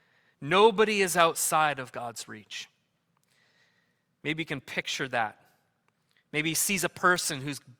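A single flipped bit corrupts one sample at 4.29 s, just before "you can picture", and again at 7.16 s, a bit error spike heard as a sharp broadband tick, about −36 dBFS then −24 dBFS.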